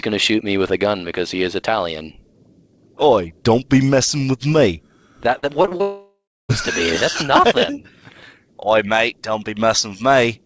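From 5.38 s to 5.81 s there is repeated packet loss, with a choppy, robotic sound. Five short holes fall in this span, the longest about 43 ms. Each hole is filled by stretching the sound just before it. About a quarter of the span, roughly 115 ms, is patched sound, not the real signal. The holes come close together.

At 5.81 s the sound cuts out and stays gone until 6.51 s. This is most likely a long network dropout. For about 0.68 s nothing real is heard. The last sound is first drawn out as a fading buzz. Then about 0.31 s of that stretch is plain silence. At 6.51 s the sound returns, but the lost part never plays. The whole clip is band-limited, with nothing above 8 kHz, which fits a wideband call codec such as G.722.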